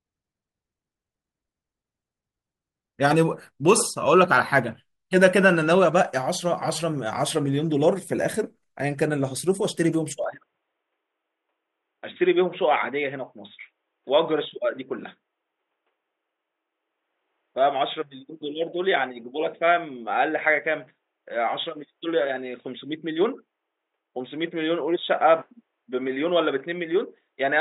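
At 10.24 s the speech abruptly turns dull and boxy and stays that way to the end, with nothing above 3.8 kHz, no gap and no level jump. A faint new noise floor, roughly 55 dB down, sets it apart from a plain filter: the input likely switched to a poorer device.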